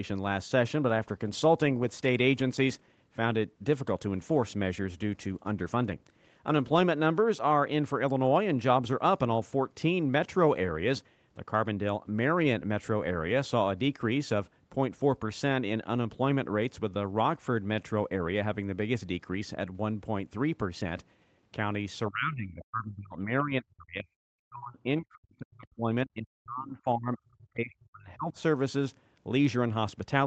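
From 22.1 to 24.07 s, and again from 24.42 to 28.36 s, the speech is pulled down hard in uneven pieces, with the deepest dips reaching around 40 dB, about one and a half seconds of the first stretch and three of the second. The likely cause is speech suppressed in double talk: with both ends talking, the echo canceller mistook the near talker for loudspeaker echo and attenuated it, while the call audio stays band-limited to 8 kHz.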